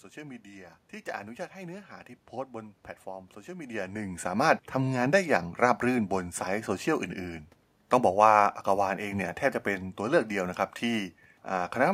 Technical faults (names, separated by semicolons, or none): none